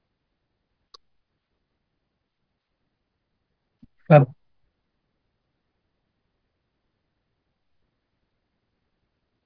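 No dropouts, clicks, distortion or level jumps register anywhere in the speech, and no fault is detected.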